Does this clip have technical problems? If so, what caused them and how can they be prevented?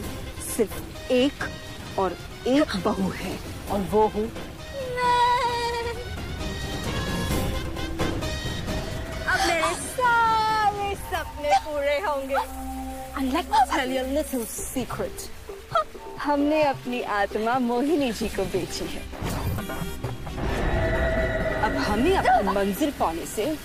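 No, no technical faults detected.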